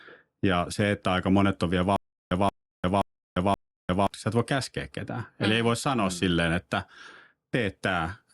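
From about 1.96 to 4.07 s the speech breaks into a stutter with silent gaps: a short burst of about 176 ms plays, then about 350 ms of dead digital silence, and that same fragment comes back four times on a steady cycle of roughly 526 ms. It's likely a stalled player or stream replaying its last chunk on each retry before running dry, so whatever should have played across that stretch is simply gone.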